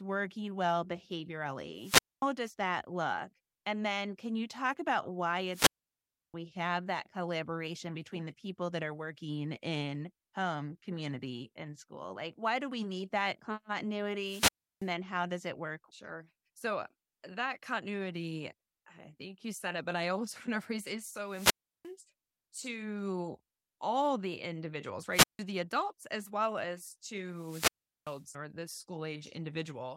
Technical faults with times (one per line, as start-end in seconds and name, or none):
1.75-2.27 wireless microphone squelch dropout
5.49-6.34 wireless microphone squelch dropout
14.18-14.90 wireless microphone squelch dropout
21.26-21.91 wireless microphone squelch dropout
25.11-25.39 wireless microphone squelch dropout
27.30-28.24 wireless microphone squelch dropout